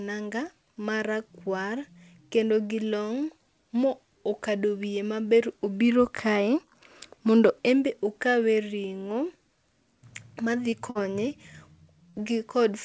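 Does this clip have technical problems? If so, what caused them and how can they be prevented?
Yes. Two kinds of fault occur on a G.722 call path, which carries nothing above 8 kHz.

Short concealed packet loss causes brief smears at 10.70–10.75 s and 12.10–12.16 s. About 30 ms of audio never arrived in time, and the decoder patched each gap by extending the preceding sound. A steadier network or a slightly deeper jitter buffer would prevent this.

A burst of packet loss causes a brief held, fading tail at 10.90–11.04 s, after which the sound resumes further on. Several consecutive packets were lost, leaving about 60 ms missing, with roughly 50 ms of concealment filling part of the gap. Forward error correction or redundant packets would prevent this.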